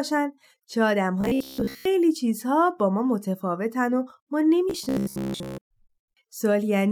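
From 1.21 to 1.85 s the speech turns to robotic sound from repeated short buffers: a rigid, metallic 66.7 Hz buzz, likely from the player looping roughly 15 ms chunks while most of the real audio was skipped. A spectrogram shows evenly spaced horizontal harmonics; the waveform repeats identical short cycles.

At 4.40 to 4.43 s a corrupt frame was decoded. A single damaged compressed frame was played anyway, its misread values putting energy at the wrong frequencies, heard as a brief chirp, squeak, blip or burst of noise. It shows as a short vertical smear on the spectrogram and a small glitch in the waveform.

From 4.70 to 5.63 s the same 66.7 Hz robotic buzz returns, with the same ladder of harmonic lines and repeating waveform cycles.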